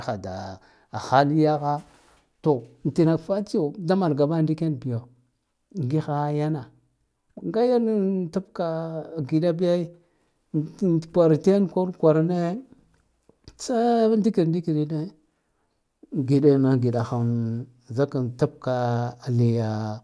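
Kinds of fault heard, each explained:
No technical faults are audible in the speech.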